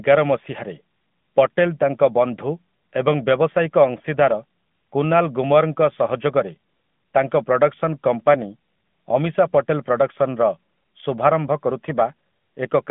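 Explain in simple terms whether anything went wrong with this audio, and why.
Yes. The whole recording went through an AMR narrowband mobile codec, the kind old phone networks use. It keeps only a thin band of sound, with nothing above 3.5 kHz. The codec rebuilds speech from a simple model, so it sounds boxy and plainly buzzy throughout.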